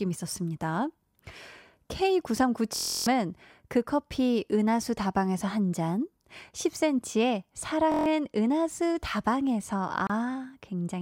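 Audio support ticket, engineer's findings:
System hang loop at 2.76–3.07 s and 7.92–8.06 s: steady buzz at about 43 Hz as one 23.2 ms slice of speech repeats exactly, 13 times then 6 times. This fits a driver or host freeze with the hardware cycling a 1024-sample ring buffer. Unlike a dropout, audio is replaced by repetition, not silence. Roughly 300 ms and 150 ms of speech lost.

Gap at a join of encoded pieces at 10.07–10.10 s: 28.6 ms gap inside continuous speech, edges smeared by the codec. Points to separately encoded segments concatenated without trimming encoder delay and end-frame padding. Unlike a dropout, nothing is lost: speech resumes exactly where it stopped.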